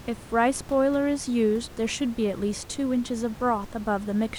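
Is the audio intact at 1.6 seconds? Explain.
Yes, the audio is intact at 1.6 seconds, with only the room's own background noise sitting about 19 dB below the speech, as part of the recording rather than a system fault.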